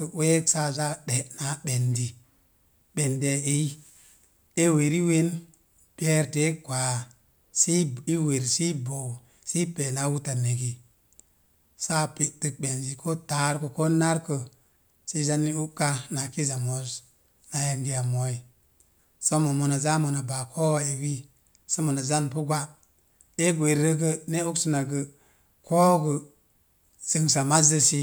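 The speech recording has no technical faults to report; the signal holds steady and intact the whole way, with nothing in it pointing to a problem in capture, processing or playback.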